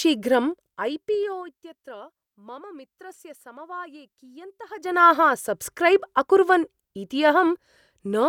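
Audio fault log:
0.47 to 1.71 s, zipper noise: the speech drops roughly 20 dB in hard 2 dB steps, about ten a second, so each step ticks audibly.
4.65 to 5.04 s, zipper noise: the level climbs back roughly 20 dB in 2 dB steps, about forty a second, a quick buzzy zip right before "सब्स्क्रैब् अकुर्वन् इति".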